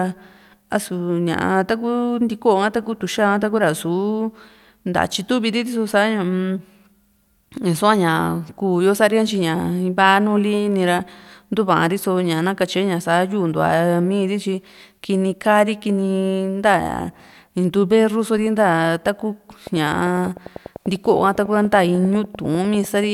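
A speech recording with a train of clicks from 19.67 to 23.05 s: regular ticks at about 10.1 per second, roughly forty in all, peaking near the speech level. Waveform shows evenly spaced spikes; a spectrogram shows thin vertical broadband lines. Likely cause is interference or a faulty connection or power supply.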